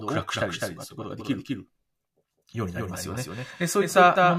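Throughout the speech, a second full-band copy trails the original by about a fifth of a second, a few dB quieter, with no decay or room colour: a doubled audio track, likely from the signal being captured again through a slower path and mixed back in.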